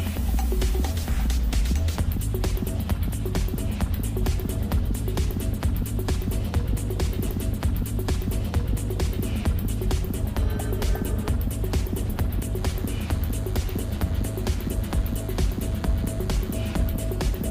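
The audio has two faults. At 7.27 s a stream segment is repeated. The player queued the same two seconds twice, so 7.27 to 9.27 s replays with a small blip at the jump back. From 12.58 to 16.89 s a DECT cordless phone buzz appears. A nearby handset or base bursts every 10 ms. The circuit rectifies this into a thin 100 Hz buzz with many harmonics, about 25 dB below the main sound.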